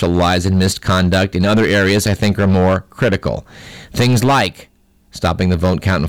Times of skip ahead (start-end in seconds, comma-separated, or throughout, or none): none